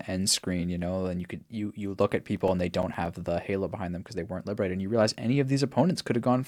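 Speech clip with CD scratch ticks from 2.36 to 3.28 s, between "you you look at" and "halo behind them because". Nine ticks of uneven strength repeat at roughly nine per second. The longest lasts around 7 ms. A disc blemish defeats error correction once per revolution. The player then interpolates or mutes the damaged samples.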